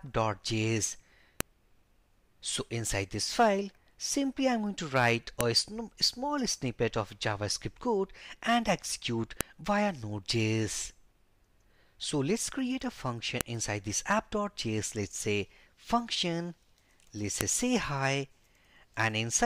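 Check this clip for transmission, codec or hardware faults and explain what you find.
One fault recurs: a file header played as audio. Sharp clicks land at 1.41, 5.41, 9.41, 13.41 and 17.41 s, exactly 4 s apart. Each is a single loud snap under a millisecond long. The audio seems to have been joined from 4-second WAV pieces without stripping each piece's header. Those header bytes get read as sample values, which are large. So every joint fires a click, regardless of the surrounding sound.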